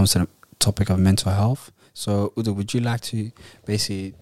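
Speech recording, with no audible technical faults.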